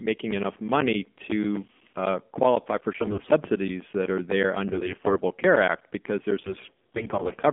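The speech passes through an AMR narrowband mobile codec, so nothing above about 3.4 kHz survives, and the low bitrate, which fits the 7.4 kbps mode, rebuilds the voice from a coarse vocal-tract model. Throughout, it sounds thin, buzzy and plainly synthetic.

AMR bit errors then corrupt the weakly protected parts of frames from 2.96 to 3.30 s, 4.72 to 5.17 s and 6.44 to 7.33 s, with roughly one bit in ten flipped in the first and last bursts and about seven in a hundred in the middle one. Misplaced excitation pulses turn the voice hoarse, scratchy and gargly while pitch and level roughly hold.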